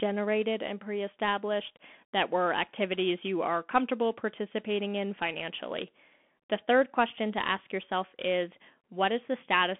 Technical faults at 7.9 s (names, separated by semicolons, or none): Bluetooth CVSD headset codec